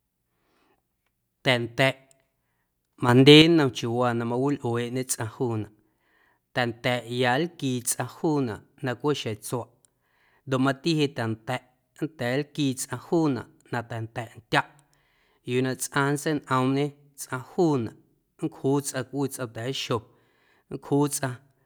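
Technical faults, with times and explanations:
3.09–3.42 s, sudden gain jump: the level steps up by about 7 dB from one sample to the next, holds for about a third of a second, then drops back. Speech and the background noise rise and fall together, which separates this from a louder delivery or a compressor swell, where the noise floor would stay put or change gradually. The likely cause is a digital gain setting or bit shift applied with no ramp.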